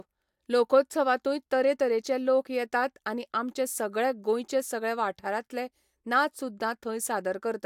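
No technical faults can be heard anywhere in the speech recording, so the signal stays steady and intact throughout.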